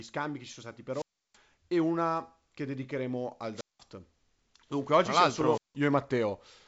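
Speech, band-limited to about 7.7 kHz as G.722 wideband telephone coding leaves it, drops out three times: a brief surge of hiss, then near silence of 0.33 s (0.92–1.37 s), 0.19 s (3.55–3.80 s) and 0.17 s (5.50–5.76 s). Each is a wireless microphone squelch dropout, where the fading radio signal made the receiver mute its output.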